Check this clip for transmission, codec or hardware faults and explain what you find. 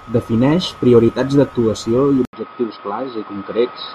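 One fault is present: at 2.25 s the speech most likely switches to a poorer input device, continuing so until the end. An 80 ms silence marks the switch, after which nothing reaches above 5.2 kHz, the level falls by a few decibels, and a faint new noise floor appears well beneath the speech. The narrower device clips the upper band, so the sound turns dull and boxy. A spectrogram shows an abrupt horizontal ceiling at 5.2 kHz, and the waveform a brief flat gap followed by slightly smaller peaks.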